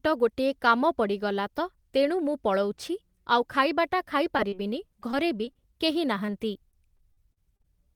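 Right after "ମୁଁ ପଳଉଛି ଆଉ ଖାଇବାଟା" the speech hits short concealed packet loss at 4.37 s and again at 4.48 s. The first hole is about 20 ms and the second about 40 ms, and that one stretches the timing a touch. The receiver papers over each gap by carrying the last sound forward, so you get a quick smear or wobble. More of the same follows at 5.11, 5.45, 5.53 and 6.26 s, each around 20 ms, with the last one adding a slight drag.

From 6.71 to 7.66 s it turns into repeated packet loss (robotic sound). There are about six dropouts, the longest around 40 ms, and together they're patched over roughly a sixth of that stretch. Because each hole gets filled by extending the previous sound just before the next one arrives, the audio turns choppy, with pieces missing.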